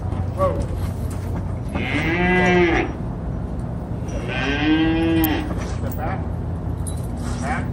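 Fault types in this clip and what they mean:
Block of digital silence: the output drops to zeros for 1.33 ms at 0.56 s, which fits a 64-sample block. That's far too short to hear as a gap, so it comes across as a tick.
Electrical switching spike: a sharp snap or tight cluster of clicks sits on top of the sound at 5.24 s, likely a nearby switch, motor or static discharge arcing into the line.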